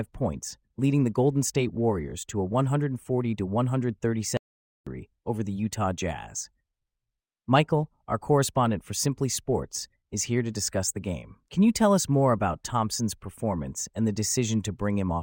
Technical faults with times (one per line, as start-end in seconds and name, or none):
4.37-4.87 audio dropout to silence